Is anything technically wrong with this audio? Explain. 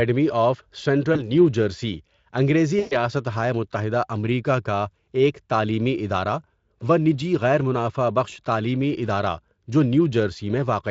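Yes. At 1.13 to 1.29 s and again at 2.79 to 2.94 s, the speech smears into a buzzy tone or a coloured noise that fades, and it stays weak for a moment after each gap. That is VoIP packet loss concealed by the speech codec. The Speex decoder, whose own coding damage is light, filled each gap by repeating its last pitch and filter at falling gain. The first gap lost about 20 ms. The second lost 120 ms, which fits six 20 ms frames.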